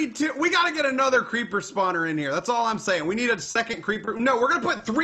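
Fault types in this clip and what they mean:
Repeated packet loss (robotic sound): From 3.43 to 4.21 s, audio data went missing six separate times in quick succession. The receiver covered each hole by extending the last stretch of sound, about 140 ms of patched audio in total, with the longest hole 40 ms. Because roughly a fifth of that span is filled-in sound and the holes come close together, the passage turns choppy and takes on a mechanical, robotic edge, with fragments dropping out.
Short concealed packet loss: Between 4.77 and 4.81 s, about 20 ms of audio failed to arrive in time. The decoder bridged the gap by continuing the preceding sound, then blended back into the real signal. With only a single brief hole, the result is a momentary smear or small wobble rather than an obvious dropout, though anything very short falling inside that window could be lost entirely.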